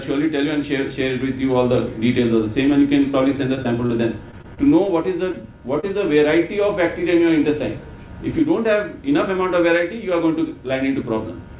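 Brief smears and wobbles interrupt the sound at 3.12, 3.55, 3.63 and 3.86 s. This is short concealed packet loss: about 20 ms of audio arrived too late each time, and the receiver bridged the hole by extending the preceding sound before blending back. The same happens at 5.32 s, where the patch also stretches the timing slightly by roughly 15 ms, and again at 5.81 s.

From 4.31 to 4.90 s the sound turns choppy, with pieces missing. This is repeated packet loss: five separate gaps totalling about 80 ms, the longest about 26 ms, were each patched by continuing the last sound. About 15% of that stretch is filled-in audio. All of this sits on a narrowband call path with nothing above 4 kHz, which fits 64 kbps G.711 mu-law coding.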